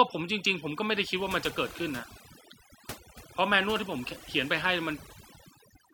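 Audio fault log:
throughout: overdone noise removal. A noise reduction stage was driven too hard on a noisy speech recording, cutting individual frequency bands deep whenever they neared its noise estimate, taking quiet speech detail with them. The background drops and breaks up into twinkling specks.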